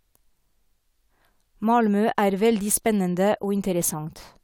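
A short bit of speech, and there's nothing technically wrong to point to anywhere in it.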